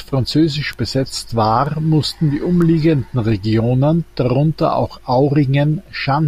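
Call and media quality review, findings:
Three sharp, broadband ticks riding over the speech at 0.73 s, 1.66 s and 2.62 s, peaking at about -8, -20 and -14 dBFS. Bit error spike: flipped bit in memory or digital link, one or two samples jumping by a power of two, then returning.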